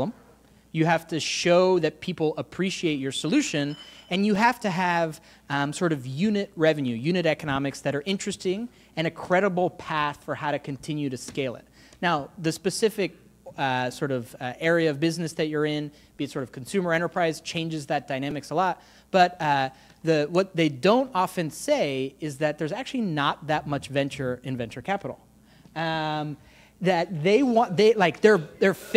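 At 4.36 s and 18.31 s, a repeated buffer: a roughly 5 ms block, consistent with a small buffer, replays once, then twice, producing brief clicks with hard joins.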